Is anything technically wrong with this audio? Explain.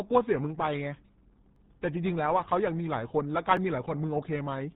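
Yes. The speech runs through the RealAudio 14.4 codec for its whole length, and there are two overlapping-chunk stutters.

Throughout, the sound is heavily damaged by this dial-up era codec. At 8 kbit/s it keeps only a crude model of the speech. Nothing above 3.8 kHz survives. So consonants lose their edge and sibilants vanish. The voice comes out muffled and gargly, with a watery, synthetic texture. The damage is heavy, not subtle.

Overlapping chunks cause two brief stutters, at 1.56 s and 3.57 s. The audio was handled in 2-second chunks. Each chunk began slightly before the previous one ended. About 7 ms of sound therefore plays twice at each join. That is too short to hear as an echo. Instead it lands as a small click or hiccup, exactly two seconds apart.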